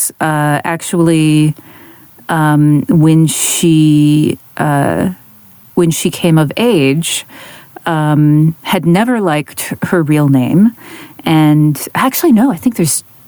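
Gain pumping runs through the whole speech recording. The gain swings by roughly 15 dB. Loud and quiet passages sit close together in level and the delivery sounds flattened. The likely cause is input gain set far too high, with a fast limiter or compressor pulling it down on every peak.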